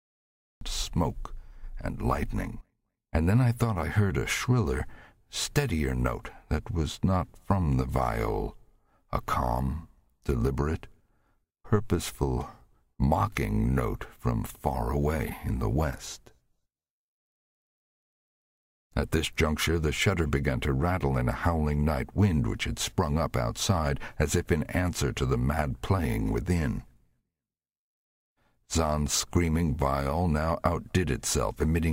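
From the start to 0.61 s there is only digital silence, and at 0.61 s the audio switches on abruptly in the middle of a sound. This is a cut-off start: capture or streaming began late, so whatever was already sounding enters partway through, with no natural attack and no fade-in to ease the transition. The onset therefore sounds clipped and sudden, as though the first part of the sound has been sliced away.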